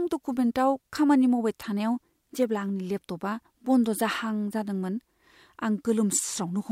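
A speech clip with a Bluetooth SBC bit pool drop near the end. From 6.16 s to the end at 6.72 s, the treble suddenly dulls and a gritty noise rises under the speech. The link seems congested, so the sender lowered the SBC bit pool to keep audio flowing. The sound fits a fall from a bit pool of 31 to 15, around 105 kbps. The top sub-bands then get few bits. The rest are coarsely quantised.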